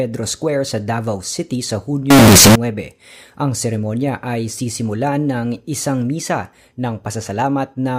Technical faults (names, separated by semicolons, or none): float read as integer